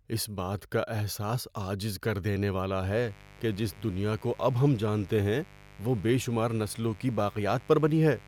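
From 2.91 s to the end, switching spikes from a dimmer, rectifier or unshielded line leak into the speech twice per 50 Hz mains cycle, giving mains buzz: harmonics stacked up into the kilohertz range, heard as a steady, raspy buzz sitting well below the speech level.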